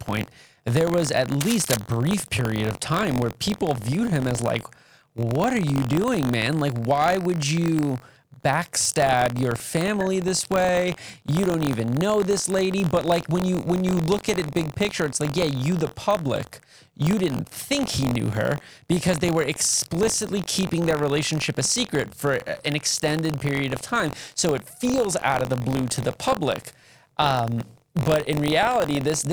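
From the start of the clip to the end, the program filling the ring buffer and the hardware draining it have slipped out of step and cross inside every period. The repeat rate of 46.9 Hz fits a 1024-sample buffer, and a small slice of each, around 3 percent, replays audio from roughly 40 ms earlier with hard joins at both edges. The result is buffer tearing: a robotic buzz near 47 Hz riding under the speech whenever there is signal.

From 1.41 to 1.79 s, after "there was at" and before "period of time where", a worn cable, connector or control was likely moved, so its contact resistance jumped about rapidly. This cable scratch noise adds dense, uneven bursts at about 5 dB below the speech, heard as a brief scratching rustle over the sound.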